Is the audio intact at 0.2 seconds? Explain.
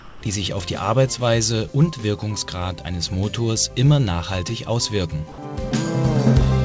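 No, at 0.2 seconds you're still inside a short patch of comfort noise in place of the background, running from the start to about 0.22 s. The sender has likely stopped transmitting during that quiet stretch, and the receiver fills the gap with synthetic noise roughly matched to the real background. So the natural ambience, which sits about 20 dB below the loud parts, is swapped for a smooth, featureless hiss about 6 dB quieter.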